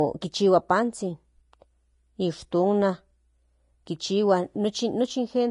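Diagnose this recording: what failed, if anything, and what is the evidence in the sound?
Codec stage. Throughout, the speech is hissy and grainy, with nothing above 10.5 kHz. Coarse treble quantisation, likely from Vorbis compression, turns detail into noise.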